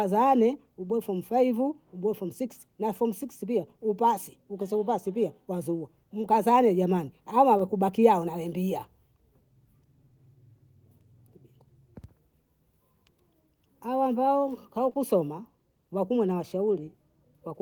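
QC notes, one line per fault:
6.21 to 6.25 s, short concealed packet loss: About 20 ms of speech arrived too late to decode. The receiver filled the gap by extending the preceding sound, then blended back. This leaves a brief smear.
7.57 to 7.61 s, short concealed packet loss: Another 20 ms gap was patched the same way. The result is a short wobble.
14.89 to 14.97 s, short concealed packet loss: Two losses back to back were each filled for about 20 ms. The longer patch leaves a smear, and a short consonant can vanish.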